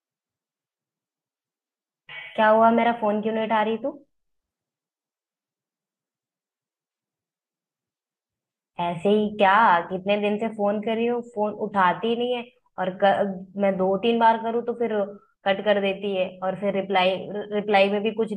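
Nothing in this speech recording calls for comment, as there are no technical faults to point to anywhere along its course.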